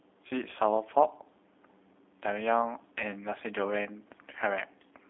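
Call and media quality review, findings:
G.729 codec damage throughout: speech band-limited to roughly 250 Hz–3.6 kHz, nothing above 3.8 kHz, rough synthetic texture from pulse-excited reconstruction, consistent with 8 kbit/s G.729A.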